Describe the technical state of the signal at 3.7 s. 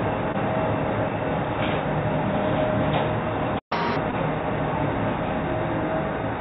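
A playback stall silences the output from 3.58 s to 3.72 s, so the sound cuts off mid-flow and 3.7 s falls inside the gap. The likely cause is the player running dry of buffered data, or its audio thread being held up, so nothing reached the output until it recovered. The dropout is plainly audible: the sound stops abruptly and then resumes where it left off.

Catch-up at higher speed follows immediately, from 3.72 s to 3.96 s. To recover the lost time, the player resamples its backlog and runs it at 1.5 times normal speed. Speed and pitch therefore rise together, by roughly seven semitones, giving a brief chipmunk-like lift that snaps back to normal at 3.96 s. The whole passage also carries the narrow band of the telephone-grade call path, with nothing above 4 kHz.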